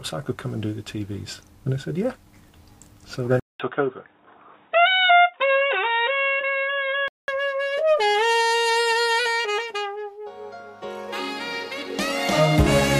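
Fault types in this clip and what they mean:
Input switched to a poorer device: after a 200 ms gap at 3.40 s, the sound goes dull with nothing above 3.8 kHz until 7.28 s, likely another microphone taking over.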